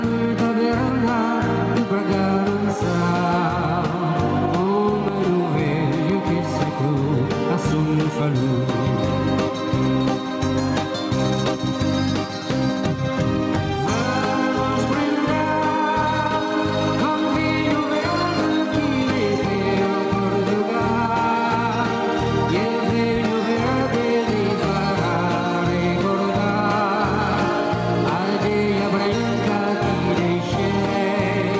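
Gain pumping runs throughout: the level swings around 10 dB as a fast limiter clamps each loud sound, likely from input gain set far too high. A loud pop at 5.08–5.12 s, a single sharp burst around 15 dB above the surrounding sound, sits over the audio as it carries on underneath, likely from a voltage spike such as a plug, switch or static discharge.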